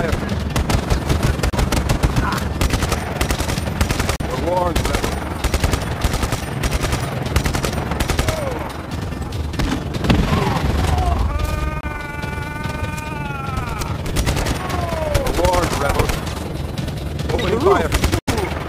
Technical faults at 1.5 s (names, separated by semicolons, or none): overlap-add ripple; Bluetooth stall